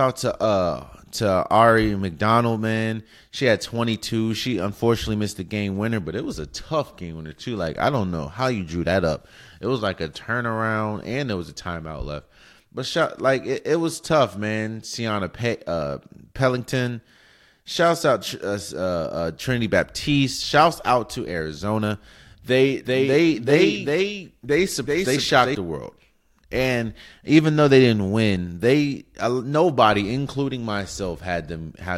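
From 22.85 to 25.55 s, just before "the world", a doubled audio track: a dry, full-band copy trails roughly 400 ms behind at about -5 dB, likely from a second capture path, showing as offset duplicate waveform shapes and spectrogram patterns.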